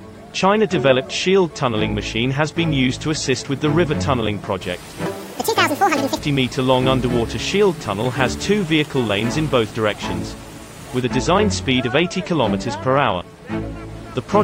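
From 5.06 to 6.18 s there's a section at the wrong speed: the audio runs at twice its recorded rate, so it's hurried and jumps up roughly ten semitones, then snaps back. Speed and pitch shift together, which likely points to that stretch being played against the wrong clock.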